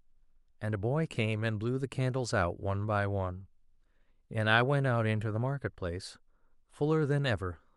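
No technical faults can be heard anywhere in this speech recording.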